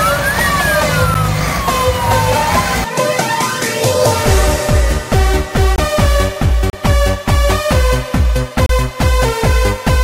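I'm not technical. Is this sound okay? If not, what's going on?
No. Four times the playback program likely failed to hand over the next chunk of sound in time, leaving a block of digital silence. Each gap snaps off and back on: a tick at 1.14 s, and short holes at 5.76–5.78, 6.70–6.73 and 8.66–8.69 seconds.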